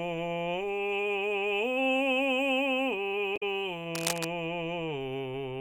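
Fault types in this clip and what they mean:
Damaged data in a compressed stream: a brief glitch from 3.33 to 3.43 s, where corrupted frames made the decoder lose sync and skip ahead to the next header.
Cable scratch noise: rough scratching over the music from 3.95 to 4.27 s, fairly loud, likely from a worn connector or cable whose contact resistance fluctuated.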